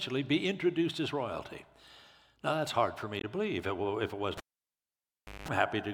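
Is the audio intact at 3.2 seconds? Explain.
No. Damaged data in a compressed stream, from 3.19 to 3.24 s, makes the decoder misread frames and hunt for the next header, causing a brief chirp or blip.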